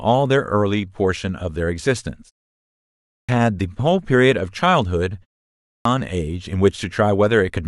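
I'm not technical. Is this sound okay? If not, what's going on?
No. There's a clipped start after a pause, twice: at 2.99 s and 5.55 s the speech jumps in abruptly, missing its first 0.3 seconds or so. The playback device dozes off during the short silence before each one and wakes too late to catch the opening sounds.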